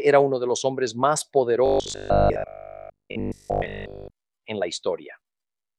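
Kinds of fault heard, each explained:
Robotic sound from repeated short buffers: from about 1.66 to 4.16 s the sound turns into a stiff, metallic 50 Hz buzz that still loosely tracks the material, likely because audio arrived too seldom and a 20 ms chunk was looped for most of that stretch.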